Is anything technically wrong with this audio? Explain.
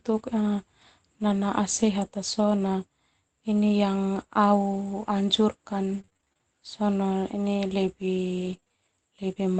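Yes, there are two kinds of packet-loss trouble in this speech, both coming through the call path.

Lost packet rebuilt from error correction, at 1.29–1.39 s and 5.09–5.11 s. The lost packets, likely three at the first spot and one at the second, were replaced by the low-bitrate backup copy carried in the following packet. There's no gap, but about 60 ms and 20 ms respectively come out rougher and noisier than the surrounding audio.

Repeated packet loss (robotic sound), at 5.93–6.41 s and 8.41–8.79 s. Packets kept dropping, and each hole was patched by stretching the previous sound before the next one arrived. The first stretch has around ten short holes, with roughly 41% of it concealed and none longer than 27 ms. The second has about four holes, covering roughly 21%, with the longest at 24 ms. Both come across choppy, with bits missing.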